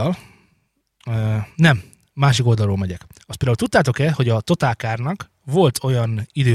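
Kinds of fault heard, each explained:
No kinds of fault are heard in this speech clip.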